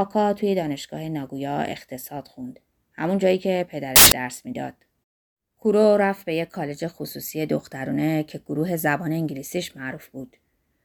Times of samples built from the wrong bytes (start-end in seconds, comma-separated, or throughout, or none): 3.96-4.12